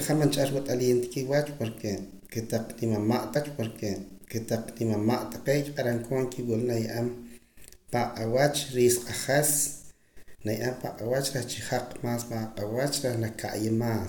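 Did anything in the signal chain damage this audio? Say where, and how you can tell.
Yes, a stream segment repeated at playback: from 3.35 to 5.33 s about 2 seconds of speech replays after a small blip, because the player queued that chunk twice.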